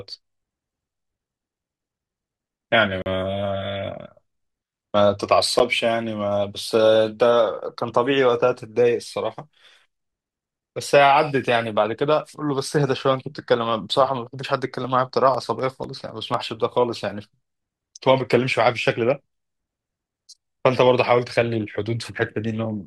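At 3.02 s the speech drops into a block of digital silence lasting 40 ms, ending at 3.06 s. A run of samples came out as zeros, so you hear a short hole. A shorter 10 ms block at 5.59 s is more of a quick tick or dip.

From 14.84 s to 16.34 s there are periodic USB or driver dropouts every 0.249 s, around seven in all. Each time, something stalls the bus or driver, and roughly a millisecond of audio is skipped rather than silenced. That gives a steady string of small ticks during the talking.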